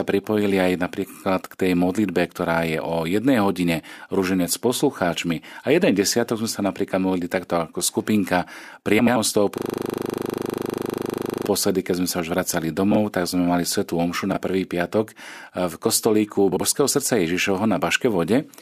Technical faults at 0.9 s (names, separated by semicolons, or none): none